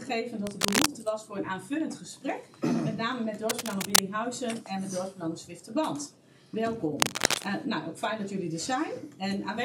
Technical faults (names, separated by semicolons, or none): cable scratch noise